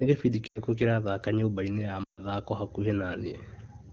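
Speech over an AMR wideband (HD Voice) link has lost AMR speech frames at 0.48–0.61 s and 2.03–2.21 s. Failed frames made the decoder stretch the last good sound with falling gain, so it smears and fades to near silence for about 80 ms and 140 ms.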